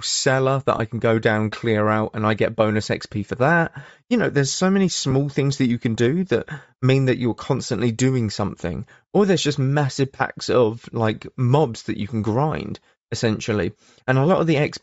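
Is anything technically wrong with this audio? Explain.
Yes, two faults are audible in this speech.

Throughout the clip, the speech has a breathy, grainy edge, and its upper frequencies sound hissy and smeared rather than crisp. This is likely Bluetooth LC3 compression. LC3 is the LE Audio transform codec, and here it appears to run near 32 kbps with 10 ms frames. At that rate the encoder discards much of the high band and the decoder fills it with shaped noise, which produces the grain.

Lost LE Audio frames cause two brief spots where the speech turns into a short noisy smear: one from 0.78 to 0.80 s, lasting about 20 ms and fitting two missing 10 ms frames, and one from 5.11 to 5.13 s, fitting a single missing frame. During each gap the decoder repeated the previous spectrum with randomised signs, so the tonal detail dissolves into noise until real frames resume.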